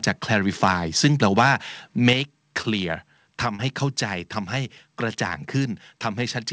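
From 2.07 to 2.13 s, the loudest peak turns harsh and crackly. Its tops are flattened, about 4 dB over the converter's limit, with a small share of samples hitting the limit. This is likely microphone overload: input gain set too high for the converter.

At 2.13 s, the whole sound drops by about 6 dB in one step. Voice and background fall together, right after that distorted peak. This sudden step points to a microphone volume stepped down, likely by the call software reacting to the clipping.

Two short concealed packet losses follow. At 2.62 to 2.65 s, about 20 ms of audio never arrived, and roughly 15 ms was filled by extending the preceding sound. At 3.55 to 3.61 s, about 40 ms went missing, with around 31 ms filled. Each gap sounds like a brief smear or wobble before the real signal blends back in. All of this sits on a G.722 call path, which leaves nothing above 8 kHz.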